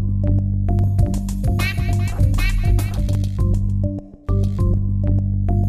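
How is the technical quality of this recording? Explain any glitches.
The recording has one fault: a doubled audio track from 0.79 to 3.15 s. A second full-band copy runs about 0.7 s behind at roughly equal level, dry and without decay, starting and stopping abruptly. It is likely from a second, slower capture path or an edit holding two offset copies.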